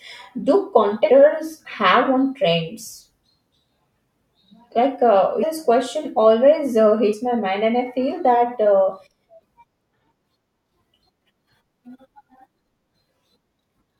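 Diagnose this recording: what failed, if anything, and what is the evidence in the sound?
Damaged data in a compressed stream shows up as three short blips in the speech, at 1.09 s, 5.42 s, and from 7.12 to 7.14 s, each lasting only about 15 to 20 ms. The fault sits at the codec stage, in the compressed file or stream before decoding. Corrupted bytes make the decoder misread or reject a frame, lose sync, and hunt for the next valid frame header. Each of these brief resyncs produces a short glitch.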